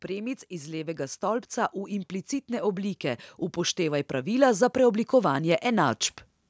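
From 0.06 s to 6.03 s the level climbs steadily by about 11 dB. This is automatic gain rising: the gain control judged the input too quiet and kept pushing its gain up across almost the whole clip. Speech and background noise swell together, which separates it from a talker simply getting louder or moving closer, where the noise floor would stay put. The call's microphone processing leaves nothing above 8 kHz, as expected for that path.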